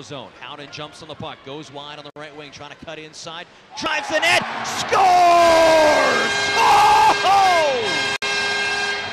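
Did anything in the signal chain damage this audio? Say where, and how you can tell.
Yes, at the codec stage. A gap at a join of encoded pieces: 60 ms silences at 2.10 s and 8.16 s, six seconds apart. Untrimmed encoder padding.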